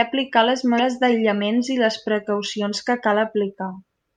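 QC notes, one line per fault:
0.76–0.80 s, damaged data in a compressed stream: a short stretch of the encoded speech arrived corrupted, so the decoder could not interpret the frames covering these 40 ms. Having lost its place in the bitstream, it had to hunt for the next valid frame header before normal decoding could resume. What reaches the ear is a brief chirp, squawk, click or short hole cutting across the speech.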